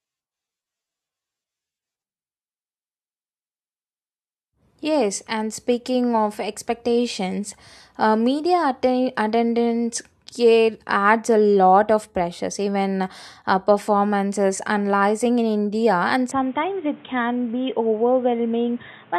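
From 16.31 s to the end, the speech turns dull and boxy with nothing above 3.8 kHz and a new noise floor, likely an input switched to a poorer device.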